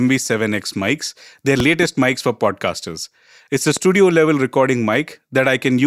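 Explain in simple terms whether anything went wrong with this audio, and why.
Loud pops occur twice: a double pop at 1.60–1.85 s and a single pop at 3.77–3.79 s. They are likely electrical jolts, such as static, landing on top of the continuing speech.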